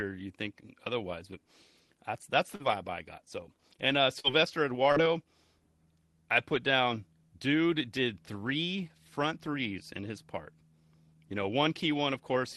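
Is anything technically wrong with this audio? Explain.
Yes. The speech has three short concealed packet losses, at 2.55–2.63 s (just after "that's that's", before "I got"), 4.20–4.27 s (just after "and uh"), and 4.92–4.99 s. In each, roughly 40 ms of audio never reached the decoder in time. The receiver stretched the preceding sound to cover the hole, then crossfaded back into the real signal. Each gap is heard as a brief smear or wobble, and a short consonant there can be lost. The call codec's coding noise and a top end stopping near 12 kHz are present throughout.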